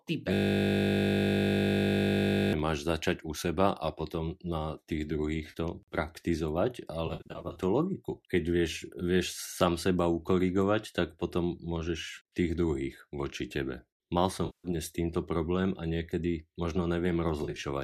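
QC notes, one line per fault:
0.34–2.53 s, system hang loop: a single 20 ms slice of audio repeats exactly, about 110 times, so the sound turns into a steady 50 Hz buzz instead of a stutter. The playback side stopped supplying new data while the output hardware kept reading the same short ring buffer. That points to a buffer of about 20 ms cycling until the system recovered.
5.50–5.55 s, 7.07–7.63 s, 14.46–14.67 s, 17.43–17.64 s, AAC frame loss with concealment: the decoder lost blocks of audio and filled each gap from the last good spectrum, which leaves smeared, noisy, phasey patches. The first gap is a brief 40 ms blur. At 7.07 s about 310 ms is missing across a 560 ms stretch, in runs up to roughly 70 ms, so the damage flutters. At 14.46 s a 180 ms loss smears. At 17.43 s about 110 ms is lost across 210 ms in short runs near 30 ms. The light graininess of the underlying stream is likely from low-delay AAC compression (AAC-ELD at 64 kbps).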